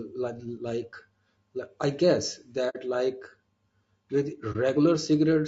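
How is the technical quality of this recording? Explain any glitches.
The technical quality is compromised: the speech carries constant codec roughness, and it drops out twice.

Low-delay AAC compression, throughout: the voice sounds rough and grainy, with noise between harmonics and a thin top band. The likely cause is AAC-ELD at a low bitrate, around 32 kbps, whose short frames resolve pitch poorly and starve the encoder of bits.

AAC frame loss with muting, at 2.69–2.76 s just after "I guess" and at 4.52–4.56 s: the sound fades out and back. The decoder zeroed missing frames, about 60 ms and 30 ms of audio, and its overlapping windows smoothed the hole's edges.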